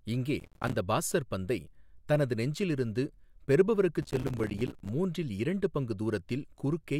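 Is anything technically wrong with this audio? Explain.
Yes. The speech has processor overload crackle at 0.40–0.75 s, just before "பாஸ்ஸர் பந்தை தனது நெஞ்சில்", and at 4.02–4.89 s, between "தனது நெஞ்சில் இருந்து பெறுபவருக்கு" and "மூன்றில் இரண்டு பங்கு". Dozens of short buffers, around 5 ms each, miss their deadline and drop out as silence. The hard-edged gaps sound like gritty tearing. A waveform shows rapid notches down to near silence, and a spectrogram shows dense vertical broadband streaks.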